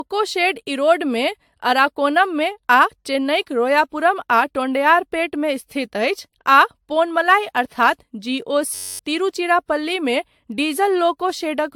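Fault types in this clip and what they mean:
Generation loss: The speech has a swirly, hollow, smeared quality, with blurred consonant onsets and nothing above 18.7 kHz. That is more damage than a single encode at this quality would leave. The likely cause is repeated lossy re-encoding, around seven passes through AAC-LC at roughly 112 to 118 kbit/s, each pass quantising on a shifted frame grid so the errors compound. Unlike a single low-bitrate encode, the artefacts build into a watery phasiness rather than plain muffling.
System hang loop: From 8.75 to 8.99 s, a 10.67 ms slice of audio repeats exactly, about two dozen times. This is what happens when the host freezes while the sound hardware keeps replaying the same ring buffer, and the loop length fits a 512-sample buffer. Because the slice is so short, it comes across as a steady buzz at 93.8 Hz rather than a stutter. About a third of a second of real audio is lost. 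Unlike a dropout or a click, the buzz is made of the signal's own material.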